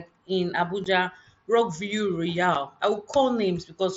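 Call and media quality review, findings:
Unconcealed Bluetooth headset packet loss: two abrupt speech dropouts, at 0.84 s (about 15 ms, fits two lost 7.5 ms frames) and 2.55 s (7.5 ms, one frame). Headset-to-phone packets dropped and filled with silence or an idle pattern, not concealed. Waveform shows hard-edged gaps. Spectrogram shows thin vertical strips across the mSBC band up to 8 kHz.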